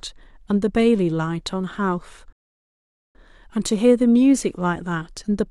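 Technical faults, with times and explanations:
2.33–3.15 s, rebuffering stall: the player's buffer ran dry, so the speech drops to silence for 0.82 s, then resumes exactly where it paused.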